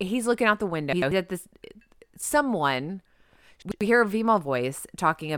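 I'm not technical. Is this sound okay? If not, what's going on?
No. Twice the speech briefly jumbles: from 0.93 to 1.12 s, right after "looking out the" and before "at this", and again from 3.62 to 3.81 s, just before "hear a". This is chunks out of order. The audio travels in small pieces of about 93 ms each, and one piece arrived a step late and played after the piece meant to follow it. Nothing is missing, but the swapped order and abrupt joins cause the garble.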